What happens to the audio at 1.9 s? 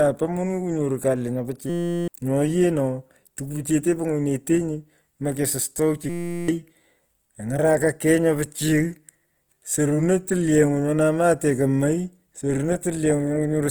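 At 1.9 s the sound is caught in a system hang loop running from 1.70 to 2.08 s. The driver stalled while the hardware replayed one 5.8 ms slice, which fits a 256-sample buffer, about 66 times. The result is a steady 172 Hz buzz that replaces roughly 0.4 s of audio. On a waveform this shows as one identical cycle tiled end to end. On a spectrogram it is a frozen comb of horizontal lines at multiples of 172 Hz.

Underneath, the whole clip carries plainly audible damage, most likely from Opus compression at 24 kbps in its CELT music mode. Bands the encoder couldn't afford were filled with folded or noise content, so the sound comes across rough and grainy. A spectrogram shows full bandwidth up to about 20.2 kHz, with speckled, noisy texture where finer detail should be.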